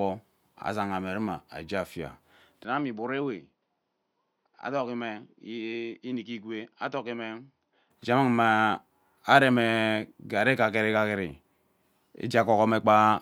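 Speech, with its sound turning duller and quieter from 2.64 s to 7.91 s: nothing above 6.2 kHz, a drop of roughly 10 dB, a faint new background noise, and no gap at either change. This is likely an input switched to a poorer device; a plain filter change would not also shift level and noise.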